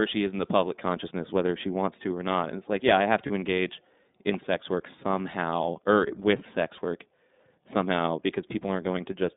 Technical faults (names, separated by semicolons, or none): iLBC codec; lost iLBC frames